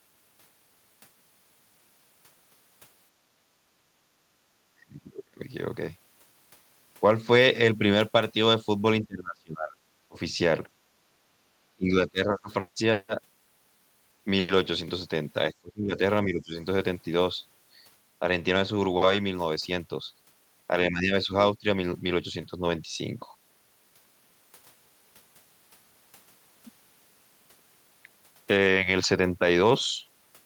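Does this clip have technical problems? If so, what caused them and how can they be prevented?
Yes. Between 3.9 and 4.41 s the echo canceller, reacting to loudspeaker playback, clamped the microphone, so the background gated by the echo canceller dips by about 11 dB for around a third of a second before returning. Tuning the suppressor to attenuate less aggressively, or adding comfort noise, would prevent this.

At 4.72–5.4 s, 9.02–10.17 s, 11.76–12.5 s, 15.52–16.56 s and 20.91–21.65 s, the speech is suppressed in double talk, likely because the canceller mistook the near talker for echo while both sides spoke. The voice drops by roughly 10 to 30 dB. Better double-talk detection and a well-converged echo canceller would prevent this.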